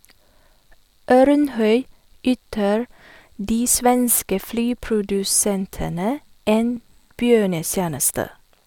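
Speech with a single brief skip at 6.77 s, caused by an overlap between stream segments: two adjacent chunks of the stream claimed the same few milliseconds, and the player trimmed that stretch away, so the waveform jumps straight across the cut. It fits a stream built from 6-second segments. Unlike a packet-loss dropout, there is no silent gap or smeared concealment, only an abrupt join, heard as a tick or tiny skip.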